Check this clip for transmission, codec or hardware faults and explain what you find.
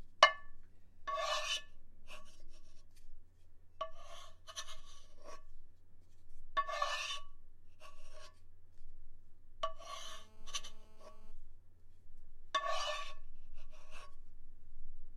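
One fault is present: GSM phone buzz. It runs from 10.04 to 11.32 s. A 2G phone near the equipment transmits in bursts about 217 times a second. The audio circuit rectifies those radio pulses. The result is a hard, raspy buzz at 217 Hz, rich in harmonics. It sits about 29 dB below the sound and holds steady, as a call does.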